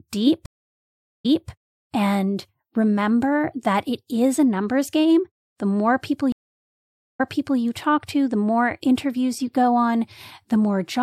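Stream reconnects at 0.46–1.49 s and 6.32–7.60 s: the connection dropped and the player went silent for 0.77 s, then 0.83 s, before restarting its decoder on resent audio. The speech therefore resumes 0.26 s and 0.44 s earlier, at "and remember that it" and, after "more people", at "talk to the more".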